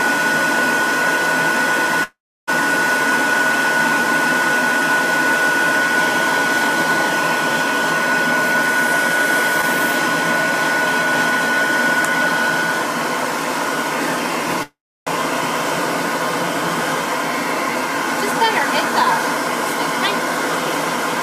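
At 2.03 to 2.49 s and again at 14.63 to 15.09 s the sound stalls in a call audio freeze: the last fragment is stretched into a brief fading buzz, then about 320 ms of silence, before the audio resumes exactly where it stopped, now 440 ms later. The likely cause is delayed packets draining the jitter buffer. A waveform shows a decaying tail then a flat line. A spectrogram shows smeared, fading bands ending in a blank gap.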